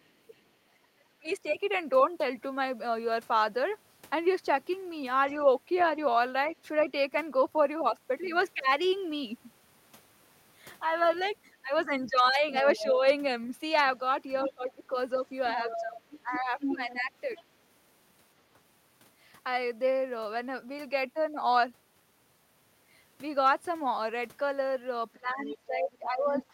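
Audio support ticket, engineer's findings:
Other side's voice leaking through: a second voice faintly under the talker at 0.04–1.35 s and 5.79–5.85 s, then plainly audible at 11.46–17.43 s and 25.46 s to end. Likely residual echo: loudspeaker playback reaching the mic, not fully cancelled.

Speech suppressed in double talk: talker's level ducks sharply at 1.06–1.29 s, dips repeatedly through 12.22–17.29 s (around two seconds in total), and drops again from 25.14 s to end. Likely echo canceller attenuating both talkers during overlap.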